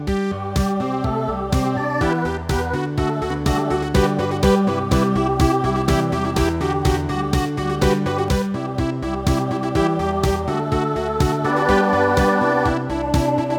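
From 3.30 to 8.28 s a second, equally loud copy of the sound trails half a second behind, starting and stopping abruptly: a doubled audio track, likely from a second, slower capture path.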